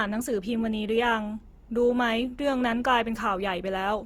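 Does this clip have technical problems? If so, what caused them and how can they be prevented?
Yes. Throughout the speech the sound is plainly rough and grainy, which points to Opus compression, likely in its music (CELT) mode at a rate that fits about 24 kbps. The encoder keeps each band's energy and fills the bands it cannot afford with folded or noise content. That gives graininess rather than the swirling spectral holes of MP3, and the audio still reaches 20.3 kHz instead of going muffled as it would in the speech mode. Encoding at a higher bitrate would prevent it.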